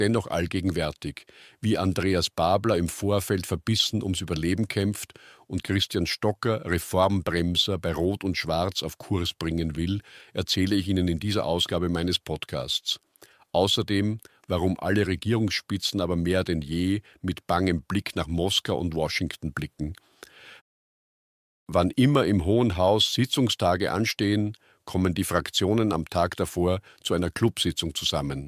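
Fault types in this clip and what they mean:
No audible technical faults detected.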